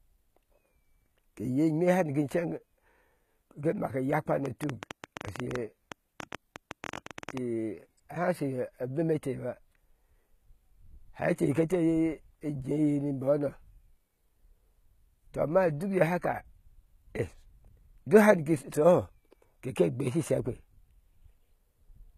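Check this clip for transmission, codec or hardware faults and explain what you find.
Two faults are audible in this speech. Throughout, the treble sounds synthetic, gritty on s sounds and empty above 14.9 kHz, likely HE-AAC compression at a low bitrate near 20 kbps. Copied-up bands replace real harmonics, which separates it from plain low-pass muffling.

From 4.46 to 7.38 s, a train of clicks: around thirty similar ticks, irregular at about 11.3 per second, roughly 10 dB above the speech. These are likely interference pulses, and their matching shape sets them apart from random crackle.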